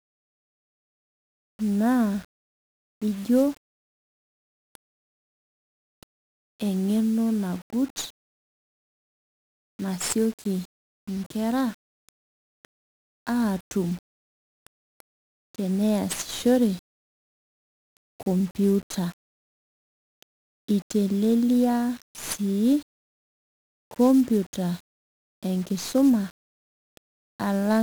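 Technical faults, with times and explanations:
Throughout: 1-bit DFPWM compression. The speech carries a dense fuzzy crackle and broadband hiss that buries the treble. Each sample keeps a single bit nudging an adaptive level up or down, so quantisation noise is heavy, consistent with a 48 kbps stream.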